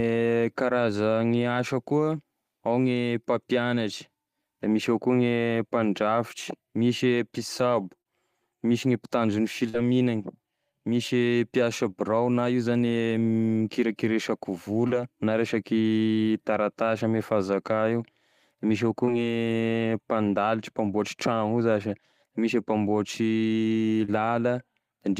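At 8.01 s, 14.88 s (just before "na resaky taratasy ame"), 19.05 s (just after "misy avao") and 24.05 s, short concealed packet loss leaves brief smears where the decoder extended the previous sound over 20 to 40 ms gaps. At 9.69 s, a burst of packet loss drops about 40 ms. The receiver holds the last sound and fades it down for about 46 ms, and the speech then resumes with that part missing.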